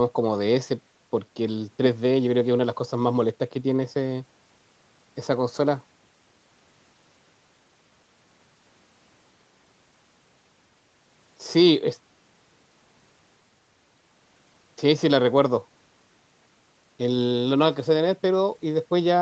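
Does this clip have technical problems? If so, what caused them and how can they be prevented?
No, there are no technical problems to prevent here.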